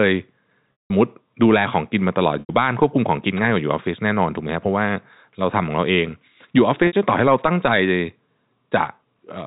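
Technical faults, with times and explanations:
0.83–0.90 s, 2.40–2.49 s and 6.87–6.93 s, packet loss with pitch repetition: speech went missing for about 180, 90 and 60 ms, and the receiver filled each gap by looping the last pitch period, which gives a brief buzzy, held tone. The 180 ms loss runs longer than the fade and sinks toward silence before speech cross-fades back. A plain dropout would leave a clean silent hole, and a stutter would replay whole syllables.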